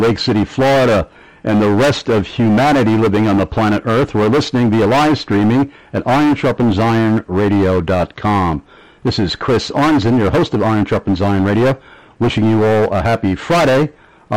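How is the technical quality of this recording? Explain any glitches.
The recording has one fault, present from start to finish.

Hard clipping, throughout: the signal arrives about 11 dB hotter than some stage can pass, so roughly a third of samples are cut flat at the limit. Those squared-off peaks add high harmonics, heard as a harsh, constant fuzz on every loud sound.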